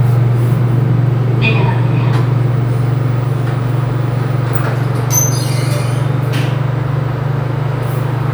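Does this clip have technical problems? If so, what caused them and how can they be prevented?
No, nothing in this audio points to a technical fault, so there is no cause to trace and nothing to prevent.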